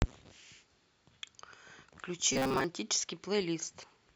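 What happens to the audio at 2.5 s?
From 2.33 to 2.64 s, speech becomes a metallic buzz at 133 Hz. This is robotic sound from repeated short buffers, likely a 7.5 ms chunk looping.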